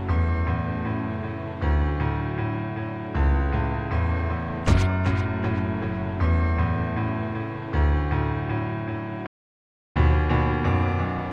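The sound cuts to silence at 9.26 s and resumes at 9.97 s. This playback stall lasts about 0.69 s, likely from the player running out of data. Catch-up at higher speed follows from 9.97 s to the end. Playback runs at 1.1 times speed, and pitch rises by roughly one and a half semitones.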